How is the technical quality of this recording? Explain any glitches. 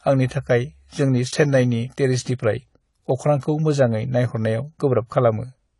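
The recording has two faults: lossy compression throughout and one brief dropout.

Across the whole clip the speech is dull, with nothing above 11.3 kHz and a smeared, fizzy texture on sibilants. This is likely AAC compression. The encoder discarded high bands and coarsely quantised the rest, which fits AAC-LC at a low bitrate of around 32 kbps.

At 2.26 s, right after "आंनि थाखाय जोंनि चेन्नाइनि", there is a block of digital silence lasting 5 ms. The sound drops straight to silence and returns with no fade, so the hard edges produce an audible tick rather than a noticeable gap.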